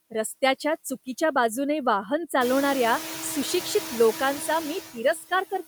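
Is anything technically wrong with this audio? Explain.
Yes, two faults. Throughout, the background sinks between phrases and rises under them. These are noise suppressor artifacts: the suppressor lowers bands it judges steady noise by about 10 dB.

From 5.14 to 5.32 s, the speech turns faint and swallowed, dropping by up to about 17 dB. This is speech cut by the noise suppressor, which mistook it for background.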